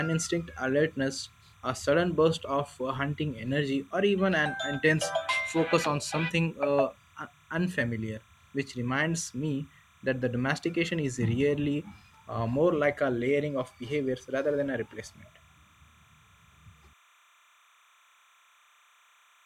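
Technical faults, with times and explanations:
Throughout, timecode bleed: 29.97-frame linear timecode leaks in from a neighbouring line, leaving a faint chirping warble near 1 and 2 kHz, roughly 35 dB below the speech.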